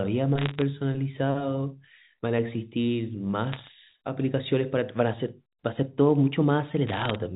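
Bit errors on a digital phone line hit this speech clip at 0.38–0.62 s, 3.52–3.68 s and 6.87–7.16 s as bursts of sharp ticks. Flipped bits, around 0.5, 0.7 and 0.4 percent respectively, corrupt single samples of the G.711 stream, and the speech underneath stays intact.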